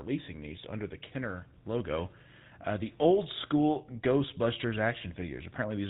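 From start to finish the speech carries GSM full-rate codec damage, plainly audible throughout. The codec reduces the voice to a vocal-tract model excited by a sparse, regular pulse train, which fits a 13 kbps full-rate stream, and nothing survives above 4 kHz. The result is a buzzy, gravelly roughness laid over the voice, rather than the metallic warble of a modern low-bitrate codec or the clean dullness of simple band-limiting.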